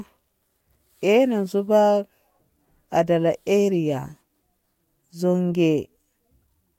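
Nothing to flag: no technical faults can be heard at any point in this speech recording.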